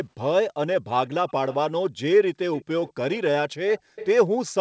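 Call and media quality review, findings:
Echo leak: delayed copy of the speech, about 15–35 dB below it, trailing the talker by roughly 0.2 s, at 1.28–1.32, 1.49–1.56, 2.54–2.65, 2.83–2.92, 3.78–4.07 and 4.46–4.52 s. Likely the far end's loudspeaker signal slipping past its echo canceller.

Background gated by the echo canceller: room tone dips sharply, as much as about 40 dB, at 1.90–2.01 s and 3.81–3.96 s, a tenth of a second or more each. Canceller suppressing the microphone hard during playback, then releasing.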